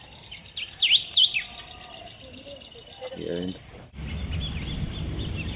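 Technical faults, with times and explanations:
No faults found; the audio comes over a call path whose top end stops at 4 kHz, as expected of a narrowband codec such as G.711 A-law.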